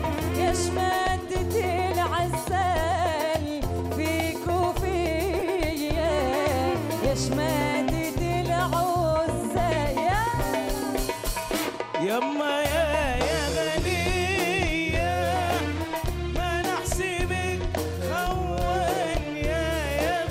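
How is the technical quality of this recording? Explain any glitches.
Three short glitches mar the recording. Each is a corrupt frame decoded: flipped bits in compressed frames were still played, so misread gains and codes put energy at wrong frequencies. The result is brief chirpy noise bursts, at 5.39–5.42 s (loudest, about -15 dBFS, likely spanning two frames), 13.87–13.90 s and 17.11–17.14 s.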